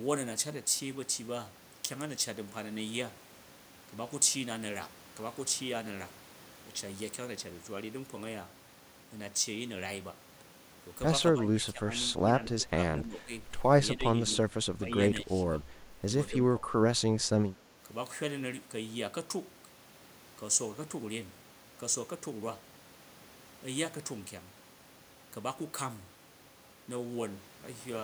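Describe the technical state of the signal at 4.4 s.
At 4.4 s the speech signal is intact, with no audible fault.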